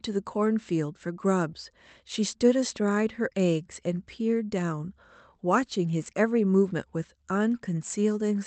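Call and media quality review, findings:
Short smear/wobble in the speech, 1.51–1.55 s. Short concealed packet loss: about 20 ms of the stream arrived too late for the decoder. The receiver extended the preceding sound to cover the gap, then crossfaded back into real audio. The Opus call path tops out near 8 kHz.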